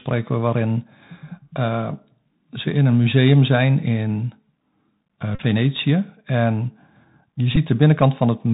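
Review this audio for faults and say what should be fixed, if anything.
The whole clip carries the Bluetooth CVSD headset codec: nothing above 4 kHz, scratchy s sounds, and a granular hiss, which fits 64 kbps CVSD. Unlike a plain low-pass filter, it adds grain and slope-overload scratch. Record through a wideband path (mSBC or a wired microphone) to avoid it.

Bluetooth headset packet repeated at 5.35–5.40 s, with about 37.5 ms lost, and at 7.56 s, with about 11.2 ms lost. The same audio replays every 3.75 ms, producing a brief buzz near 267 Hz rather than the silence of a dropout. Keep the headset close to the phone and away from radio interference to stop it.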